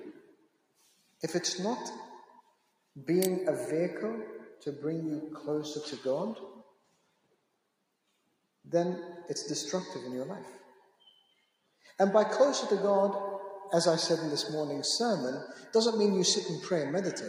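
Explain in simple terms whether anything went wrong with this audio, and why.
A noise suppressor built for speech was left running on this sound, so it treated steady, lingering parts as noise and kept turning them down, making the level pump and thin.

In several spots the sound was cut by the noise suppressor, sinking noticeably or fading early: 0.13 to 1.23 s, 2.24 to 2.96 s, 6.51 to 8.66 s, 10.6 to 11.98 s, and more gently at 15.56 to 15.74 s.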